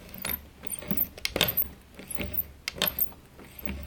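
Audio read two samples at a time (double speed) runs throughout the clip: each pair of samples was treated as a single frame, as if the data were stereo or twice as wide, so everything plays twice as fast and 12 semitones higher.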